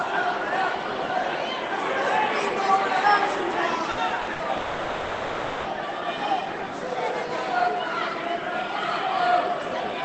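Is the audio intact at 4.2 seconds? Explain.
No. A burst of packet loss hits from 4.21 to 4.30 s. Packets went missing in a row. The receiver fills the gap by extending the last sound and fading it, for about 60 ms. Then the audio resumes with about 60 ms skipped.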